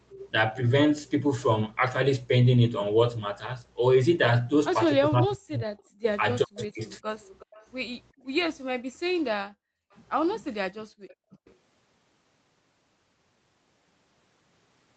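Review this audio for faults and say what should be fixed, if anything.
Echo leak: the far end's echo canceller likely failed to remove its loudspeaker signal, so a copy returns 370 ms late. It sounds like a faint trailing repeat at 0.1–0.29 s (about −25 dB), 5.78–5.82 s (about −40 dB), 7.22–7.66 s and 11.09–11.14 s (both about −30 dB). Retune or reconverge the canceller for that 370 ms path delay.

Speech suppressed in double talk: when both sides spoke together, the canceller could not tell the local talker from the echo and likely attenuated everything. Across 5.07–7.05 s the speech dips or breaks up, dropping by up to about 40 dB for roughly a second in total, and again briefly at 11.21–11.25 s. Use a canceller with proper double-talk detection rather than aggressive suppression.

Background gated by the echo canceller: while the loudspeaker was active, the canceller clamped the microphone hard, so the room sound falls away by up to about 40 dB. 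The ambience drops out for roughly a second in total between 8.13 and 9.93 s, and in a short gap at 10.87–10.93 s. Reduce the suppressor's gating depth or add comfort noise so the background stays continuous.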